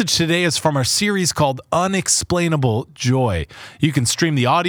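Hard clipping at 0.66 s, a single brief event in this speech clip, falls between "today is" and "our series". For a few milliseconds the peak of the waveform exceeds what a stage in the chain can pass, overdriven by about 2 dB, so the top is sliced flat instead of rounding over. That squared-off moment injects high harmonics, heard as a short, sharp crackle on the loudest instant.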